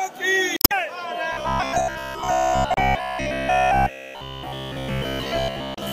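Damaged data in a compressed stream first hits at 0.56–0.72 s, where the decoder misreads corrupt frames, loses sync and resyncs at the next frame header. Robotic sound from repeated short buffers starts at 1.33 s and lasts to the end: a rigid metallic buzz near 66.7 Hz, likely from a 15 ms stretch being replayed for roughly 70% of the time while new audio is skipped. The same stream damage returns briefly at 2.74–2.79 s and 5.75–5.79 s.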